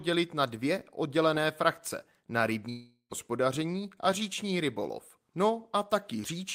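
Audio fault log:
2.69–3.13 s, long network dropout: the last sound trails off as a fading buzz, then 0.1 s of silence; likely lost packets, with 0.42 s of audio missing.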